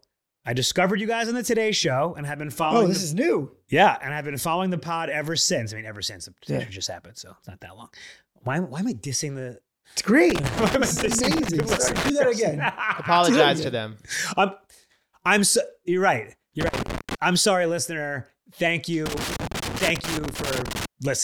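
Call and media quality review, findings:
Loose connector crackle in speech, 10.30–12.10 s, 16.61–17.15 s, 19.06–20.86 s. Irregular crackle and scratching bursts. Probable component: worn or dirty connector or jack. Contact makes and breaks as it shifts, chopping the signal; stray DC adds pops.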